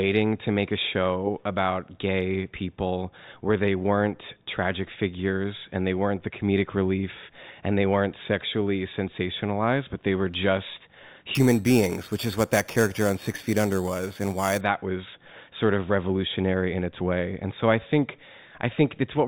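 A speech clip. From 11.35 to 14.6 s, between "but they were just" and "was sort of revolutionary", there is imaging from sample-and-hold upsampling. Samples were repeated without smoothing, which fits an 8 kHz source raised to 48 kHz. A metallic fizz about 17 dB below the voice mirrors it from 4 to 8 kHz.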